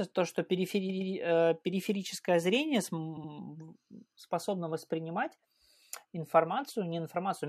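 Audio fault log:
0.88–1.12 s: repeated frames. Right after "то что", a block of about 116 ms plays twice more, giving a quick triple stutter. That block length points to about five compressed frames being resent, and it adds 232 ms to the audio.
3.16–3.30 s: repeated frames again. A shorter block of about 70 ms, roughly three frames' worth, repeats twice, adding 139 ms of stutter.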